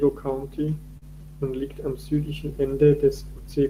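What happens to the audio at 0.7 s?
At 0.7 s the speech has a faintly unsteady tempo, with small hiccups where brief pieces are stretched by repetition. This is clock drift between sender and receiver: the sender's clock runs roughly 3% slow, so the receiver's jitter buffer keeps draining and must be refilled.

Those hiccups are repeated timing corrections, running from 0.22 s to 3.70 s. To stay in step with the slower sender, the receiver repeatedly duplicates short fragments, playing the stretch at 98% speed and adding about 70 ms overall in small, unevenly spaced steps.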